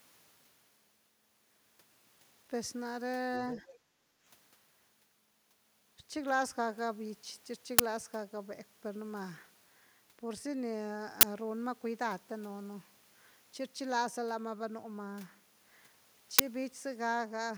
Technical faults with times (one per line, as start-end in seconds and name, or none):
3.33-3.79 other side's voice leaking through
3.93-4.24 background gated by the echo canceller
7.79 uninitialised buffer
11.21 uninitialised buffer
16.39 uninitialised buffer